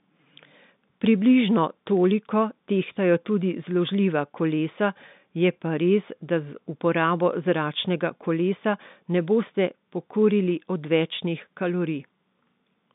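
No faults can be heard anywhere in this speech.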